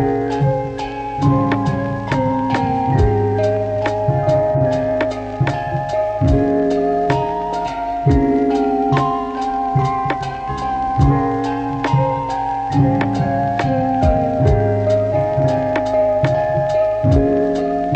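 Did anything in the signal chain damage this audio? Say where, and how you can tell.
Yes, at the codec stage: damaged data in a compressed stream causes brief disruptions at 0.38–0.43, 7.62–7.66, 10.45–10.50 and 15.10–15.15 s. Corrupt bytes make the decoder misread frames and hunt for the next frame header. On a spectrogram each event shows as a short broadband smear, and the waveform shows abrupt discontinuities.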